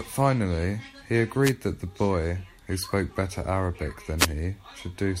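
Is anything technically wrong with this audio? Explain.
Yes. Two wireless microphone noise hits break into the speech, from 1.41 to 1.54 s and from 4.18 to 4.27 s. Each is a brief swish of static as the radio signal fades from cancelling reflections and receiver noise swells over the voice. Unlike a digital dropout, the sound fills with hiss instead of going silent.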